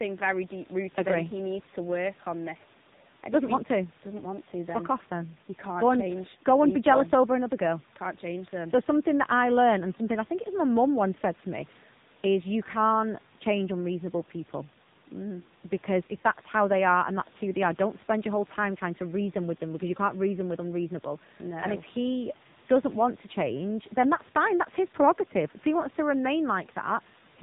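From start to finish the speech has passed through an AMR narrowband mobile codec at one of its low modes, with heavy codec damage consistent with a rate near 6.7 kbps. The codec rebuilds each 20 ms frame from a vocal-tract model fed by sparse pulses, so consonants lose their edge and vowels take on a buzzy, synthetic quality. Nothing reaches above about 3.8 kHz, leaving a boxed-in telephone tone, and the room noise, about 31 dB below the speech, is smeared into a faint warble.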